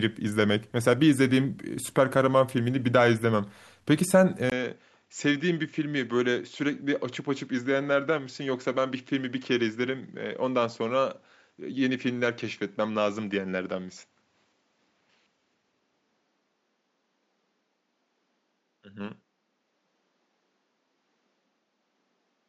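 At 4.50 s the speech drops out for a brief 20 ms gap, then comes back duller and a few dB quieter, and it stays that way to the end. Nothing reaches above 7.6 kHz after that point, and a faint new noise floor sits well below the speech. That combination is most likely an input switched to a poorer device mid-recording, since the narrower band, lower level and different background all change together at the same instant.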